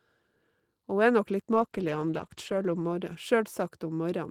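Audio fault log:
1.54–3.65 s, call bitrate drop: the encoder was forced onto far fewer bits, which fits a fall from about 32 to 13 kbps, lowest for about 1.04 s. Coarser coding makes the speech sound rough and watery, with high frequencies thinned, until bitrate recovers.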